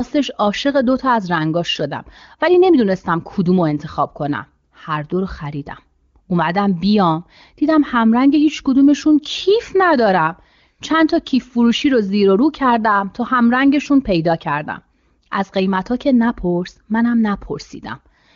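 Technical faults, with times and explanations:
No faults found; the speech shows the band-limited character of the AMR wideband (HD Voice) codec working normally at a high rate, consistent with its 23.85 kbit/s mode.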